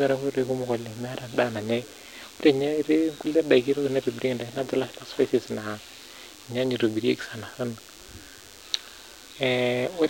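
Speech runs over a steady DECT cordless phone buzz throughout: 100 Hz radio bursts rectified by the audio circuit, sitting well below the voice. A spectrogram shows evenly spaced horizontal harmonic lines stacked from 100 Hz upward.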